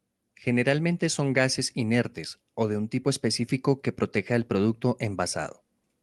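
No technical faults can be heard in this speech, which comes through a WebRTC call path with the Opus codec working as normal.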